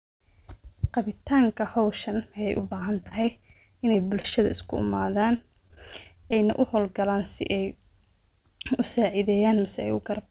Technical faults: repeated packet loss (robotic sound)

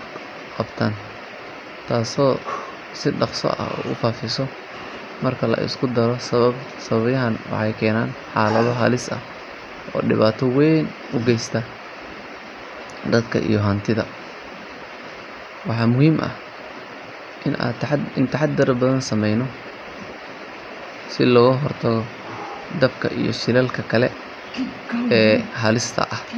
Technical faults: none

